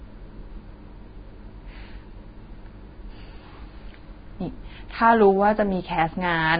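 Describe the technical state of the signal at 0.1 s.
At 0.1 s the signal has been through low-bitrate encoding, most likely Vorbis compression, and the damage runs through the whole clip. The encoder has kept only a coarse spectral envelope and quantised the fine detail above it very crudely, which fits a bitrate around 16 kbps. Nothing survives above 4.9 kHz, so the speech sounds dull and band-limited, while the remaining treble turns into hissy, grainy noise that roughens tones and smears consonant attacks.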